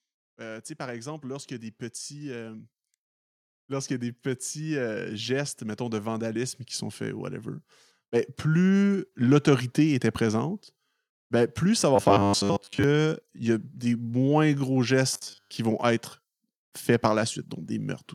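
From 0.35 to 2.73 s the automatic gain rises by about 5 dB, and again from 3.66 to 7.44 s by about 8 dB. The gain control judged the input too quiet and raised it gradually, so speech and background swell together. On a waveform the envelope, noise floor included, widens steadily across each span.

Between 11.96 and 12.84 s, just after "ben plus ça va" and before "y a", the speech turns into a robotic sound with a rigid, metallic buzz near 100 Hz. The same happens from 15.13 to 15.51 s, between "moins gros" and "qui vont être faits". This is likely from repeated short buffers: new audio arrived too seldom, and roughly 70% of the time was filled by looping about 10 ms of earlier signal. On a spectrogram this appears as evenly spaced horizontal harmonics at multiples of 100 Hz. On the waveform it shows as a short cycle repeating exactly.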